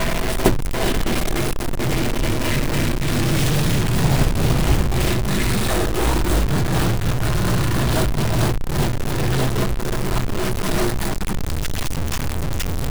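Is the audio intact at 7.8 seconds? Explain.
No. At 7.8 seconds, as throughout the clip, there is harsh, buzzy distortion from what is likely a stuck bit, with roughly half the samples offset by a step of about -20 dBFS. Unlike clipping, it persists at low levels, filling quiet gaps with noise.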